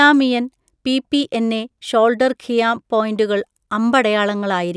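No technical faults can be heard anywhere in the recording; the signal stays intact and continuous throughout.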